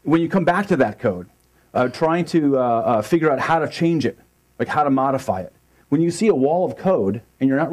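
Hard clipping appears at 0.13 to 0.83 s, 1.79 to 2.05 s, 2.94 to 3.55 s, 4.62 to 4.81 s and 5.93 to 6.44 s. Peaks exceed the level a stage can pass by about 1 to 2 dB and are cut flat, adding high harmonics heard as brief crackle on loud moments.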